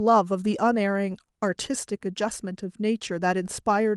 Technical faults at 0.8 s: none

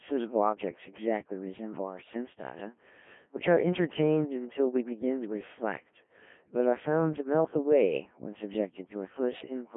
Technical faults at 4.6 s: Codec 2 vocoder

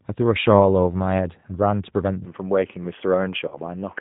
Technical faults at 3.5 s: G.729 codec; input switched to a poorer device; VoIP packet loss concealed by the speech codec

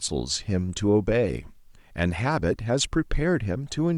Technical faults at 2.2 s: none

